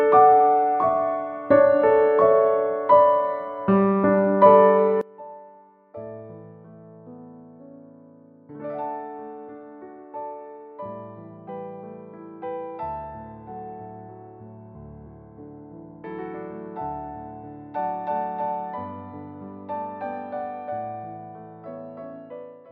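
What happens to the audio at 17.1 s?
At 17.1 s the sound is faint, down by about 24 dB, with its centre nearly gone. This lasts from 5.01 s to the end. The likely cause is one channel inverted: with one stereo channel's polarity reversed, the shared content cancels when the channels are summed, leaving only their difference.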